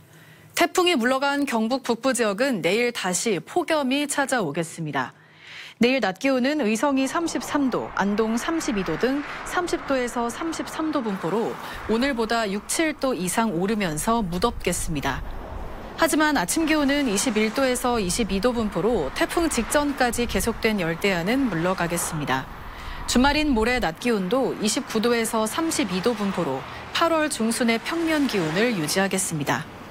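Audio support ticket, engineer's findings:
De-emphasis applied wrongly, 4.45 to 11.09 s. Dull, muffled top end; treble down about 10 dB at 10 kHz relative to 1 kHz. De-emphasis stage applying a treble cut to audio that had no pre-emphasis, or applying it twice. Gradual tilt, not a low-pass's abrupt cutoff.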